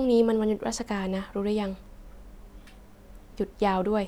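No technical faults can be heard anywhere in the speech.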